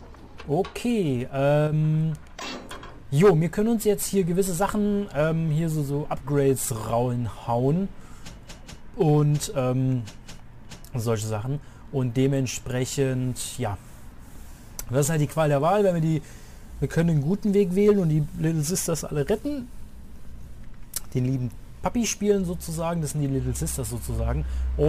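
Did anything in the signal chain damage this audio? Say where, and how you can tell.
Yes. From 1.67 to 1.72 s, a 50 ms stretch, one channel drops out: the level falls abruptly by about 6 dB and recovers just as sharply, the signature of one side of a stereo pair vanishing before the mono sum. The likely stage is analogue wiring, such as a momentarily open connector or cable contact. On the waveform the envelope shows a brief, flat-edged step down to half amplitude; the spectrogram shows a thin vertical band uniformly dimmer across all frequencies.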